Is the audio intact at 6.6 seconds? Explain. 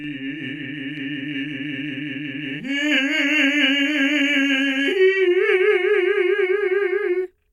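No. At 6.6 seconds the music carries a channel delay (doubling), which runs through the whole clip. One channel arrives 40 ms late, and when the two are summed to mono, every attack is heard twice at equal level, a short slap that thickens and smears the music. On the waveform, each transient shows a twin of the same height 40 ms later. A spectrogram shows fine comb notches spaced every 25 Hz.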